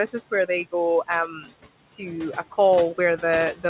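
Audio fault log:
Throughout: noise suppressor artifacts. The room noise, which sits about 18 dB below the speech, is pulled down by about 17 dB in the gaps and lifts back under the speech. The suppressor's band-by-band gain changes leave a residue, heard within a band that stops at 4 kHz.
1.28–1.53 s: speech cut by the noise suppressor. Just after "is where they go" and before "to a", the suppressor mistook quieter speech for background and turned it down with the noise, by about 16 dB at its deepest. For roughly a fifth of a second the speech sounds swallowed and faint.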